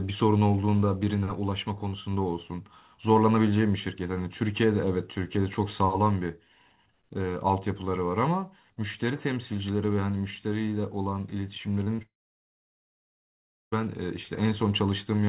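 Speech carried over a call link, band-limited with nothing above 4 kHz, which fits a G.711 narrowband path. At 11.84–11.88 s and again at 11.96–12.00 s there is short concealed packet loss. About 20 ms of audio failed to reach the decoder each time, and the receiver covered the gap by extending the preceding sound before crossfading back, heard as two quick smears within about a sixth of a second. Immediately after, from 12.02 s to 13.74 s, the sound stops. A brief trailing buzz dies out within a few hundredths of a second, leaving about 1.6 s of silence before the speech resumes further along, with roughly 1.7 s never played. That pattern is likely a long network dropout, where concealment runs out and the receiver mutes until packets arrive again.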